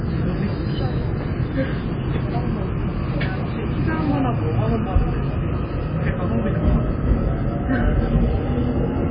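From start to finish the sound is badly starved: nothing at all comes through above 5 kHz, and what's left has that watery, swirly texture, with faint detail flickering in and out and transients smearing rather than landing cleanly. That's likely heavy MP3 compression at a very low bitrate, somewhere around 16 kbps. The encoder chops off the top end and drops quieter frequency content from frame to frame, so the damage is heard throughout.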